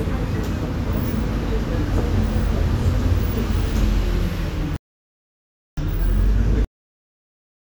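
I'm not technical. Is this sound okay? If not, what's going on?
No. There are two problems. At 4.76 s the sound stops dead for about one second, then carries on at 5.77 s. This is a playback stall. The player likely ran short of data or got held up, so nothing came out until it caught up.

Then, at 6.65 s, the sound ends abruptly. There is no natural fade or tail. It drops straight to silence mid-sound. This is a cut-off end. The final stretch of audio was never played, so the recording ends early.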